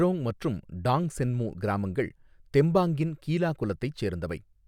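No audible technical faults anywhere in this speech recording.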